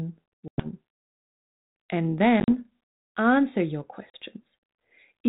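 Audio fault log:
0.48–0.66 s, 2.4–2.6 s, 4.1–4.17 s: packet loss on an ADPCM call. Hard-edged silent gaps of 100 ms, 60 ms scattered over 80 ms, and 40 ms. Afterwards the desynchronised predictor and step size bring speech back slightly distorted until it settles, unlike a clean dropout.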